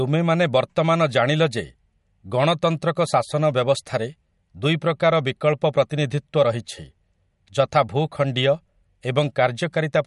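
MP3 compression damage runs through the whole speech clip, from start to finish, and is plainly audible. It is likely the result of MP3 encoding at a low rate, which fits something around 50 kbps. With too few bits, the encoder discards quiet frequency lines that flicker in and out between frames. That leaves the speech sounding watery, with swirly, metallic chirping on s sounds and softened, smeared consonant attacks.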